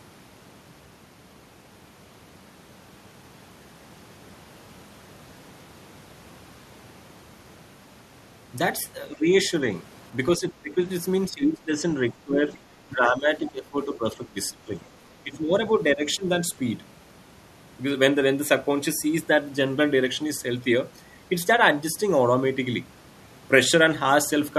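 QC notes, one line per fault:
9.12–9.51 s, 10.37–10.81 s, 11.3–12.45 s, 12.87–14.73 s and 15.23–16.26 s, speech suppressed in double talk: with both ends talking at once, the echo canceller likely mistook the near talker for loudspeaker echo and pulled the whole signal down. The talker's speech sinks by about 15 dB in most of these stretches and about 20 dB at 11.3–12.45 s, in patches rather than continuously, so words thin out and drop away in pieces. The worst run is about 1.5 s near 13–14.7 s.
10.5 s, 12.5 s and 13.45–13.52 s, other side's voice leaking through: the canceller likely left residue of the far-end voice that the loudspeaker fed back into the microphone. Each leak is a brief scrap of a second voice, about 20 dB down at 10.5 s, about 30 dB down at 12.5 s and about 25 dB down at 13.5 s, faint and clipped short because the residue survives only for tens of milliseconds.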